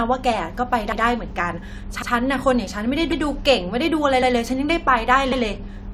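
At 2.02 s, overlapping chunks: a 1-second chunk began about 100 ms before the previous one ended, so that slice of speech replays as a brief stutter.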